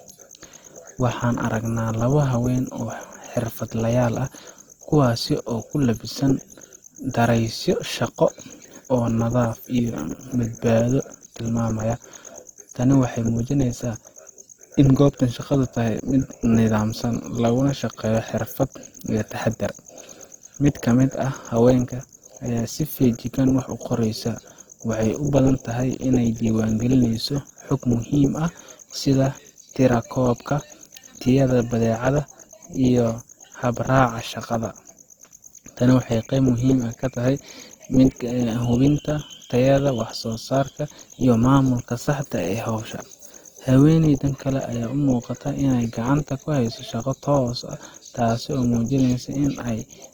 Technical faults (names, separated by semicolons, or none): Opus compression